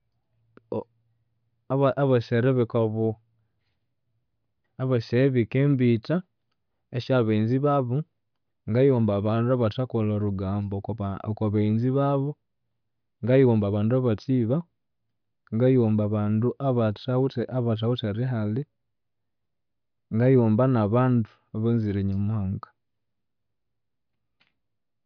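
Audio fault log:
No audible faults detected.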